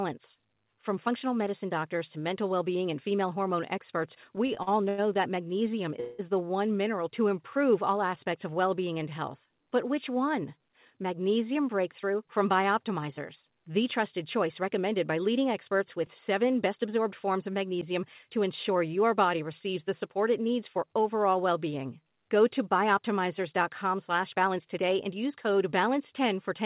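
From 4.36 to 5.0 s there are repeated stalls (stutter): the jitter buffer kept running dry, and five times the receiver stretched the last sound to cover the wait, the longest about 90 ms, filling about 28% of that stretch. The audio drags and hiccups. On a spectrogram the filled stretches appear as short smeared, repeating bands, and the waveform shows brief looped segments.

At 6.0 s comes a call audio freeze lasting about 0.2 s. The last sound holds as a fading buzz or hiss with no dropout to silence, and the audio then resumes where it stopped, so nothing is lost but a pause is inserted. The likely cause is delayed packets emptying the buffer. A spectrogram shows a flat, frozen band where the harmonic pattern stops changing.

From 24.46 to 25.37 s a jitter buffer speed-up trims surplus buffered audio, removing pitch-period slices totalling roughly 70 ms. The sound runs about 7% fast at unchanged pitch and feels hurried. 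The waveform shows whole cycles cut out at tiny splice points, and spectrogram features are squeezed in time. Throughout, the spectrum stops at 4 kHz, pointing to a narrowband call codec such as G.711 A-law.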